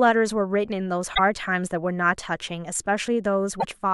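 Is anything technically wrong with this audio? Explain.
Yes. Damaged data in a compressed stream briefly corrupts the speech at 1.11–1.19 s and 3.57–3.65 s. Bad bytes make the decoder misread frames and lose sync, giving a short glitch. A spectrogram shows an abrupt broadband smear; the waveform shows a discontinuous burst.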